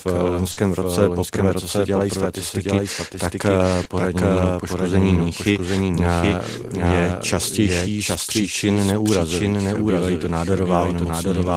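Speech throughout, with a second full-band copy of the whole recording trailing roughly 0.7 s behind at about the same level. This is a doubled audio track, likely from the signal being captured twice by a slower path. Unlike a room echo, the copy has no decay or reverberant colouring and stays just as loud. A burst of packet loss at 0.51 to 0.59 s, right after "eh v", holds the last sound as a fading buzz for about 60 ms. About 60 ms of audio is then missing when it resumes at "roce poprvé co se". A short concealed packet loss at 3.83 to 3.87 s, between "dělají statistiky tak eh" and "nebo poškození míchy eh", fills only about 20 ms. It is heard as a brief smear rather than a held, decaying tone, and the part skipped is far shorter.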